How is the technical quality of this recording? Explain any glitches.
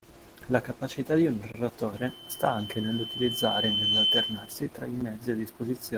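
The recording has three clear problems: audible low-bitrate compression throughout, two short dropouts to digital silence, and a feedback squeal lasting almost three seconds in the middle.

Opus voice compression runs through the whole clip at 16 kbps in hybrid mode. The lower band is coded by linear prediction and a transform layer covers the top. At this rate both layers quantise the signal coarsely, so the damage is plainly audible. The speech sounds hoarse and slightly robotic.

A block of digital silence starts at 1.52 s, right after "capacità di un", and lasts about 21 ms until 1.54 s. Its length fits a 1024-sample buffer that wasn't filled in time, so zeros went out instead. The audio drops abruptly to nothing and returns just as abruptly, leaving a brief hole. A second, shorter dropout of about 7 ms occurs at 5.01 s, after "tra i", and is heard as a tick or dip.

A loudspeaker feedback squeal runs from 1.96 s to 4.63 s, between "capacità di un" and "tra i". 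The microphone is picking up its own loudspeaker output, and at 3.1 kHz the loop gain exceeds one. That frequency reinforces itself on each pass. It builds over roughly two seconds into a squeal about 5 dB louder than the speech, then stops.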